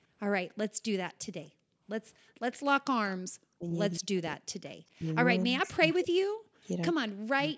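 From 0.71 to 2.34 s, the background is gated by the echo canceller: the room sound ducks, at its deepest by about 40 dB, for around 0.7 s in total while the far end plays.

From 1.08 to 3.15 s there's a faint delayed copy of the speech trailing 254 ms behind, about 20 dB down. It comes back, quieter still, at 4.32 to 4.74 s and 5.66 to 5.95 s. That's likely an echo leak, with the far-end loudspeaker getting past the canceller.

From 2.91 to 7.55 s the talker keeps dipping deeply, roughly two seconds' worth altogether. That's likely speech suppressed in double talk while both sides were speaking.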